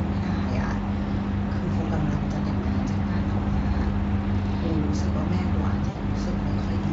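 Right at 5.89 s there's VoIP packet loss concealed by the speech codec, running to about 6.0 s. Around 60 ms of audio went missing, which fits three 20 ms frames, and the Speex decoder filled the gap by stretching its last pitch and filter while turning the gain down. It comes across as a short buzzy or noisy smear that fades instead of a clean dropout.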